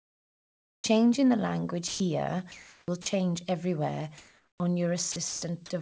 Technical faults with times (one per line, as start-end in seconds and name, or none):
0.00-0.84 comfort noise in place of the background
1.88-2.00 sound dropped by the voice detector
2.52-3.06 sound dropped by the voice detector
4.18-4.60 comfort noise in place of the background
5.12-5.42 sound dropped by the voice detector